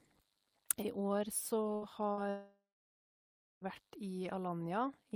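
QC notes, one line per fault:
1.75–1.85 s and 2.12–2.20 s, burst of packet loss: about 60 ms lost each time, the receiver held the last sound and faded it briefly, then resumed with that stretch missing.
2.29–3.64 s, long network dropout: about 1.3 s of speech is gone. The last sound is held and fades, then about a second of silence follows, likely because no packets arrived.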